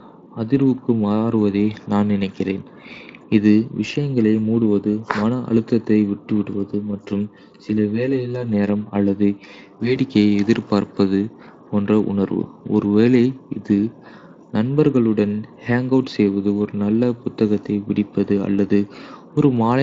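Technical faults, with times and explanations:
6.75–9.96 s, channel delay (comb filtering): one channel runs about 10 ms late, so the mono sum turns hollow and phasey, with evenly spaced notches starting around 50 Hz.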